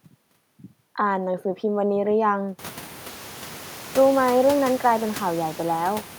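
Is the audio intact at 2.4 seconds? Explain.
Yes, at 2.4 seconds the speech is intact, with no fault in the signal at that moment.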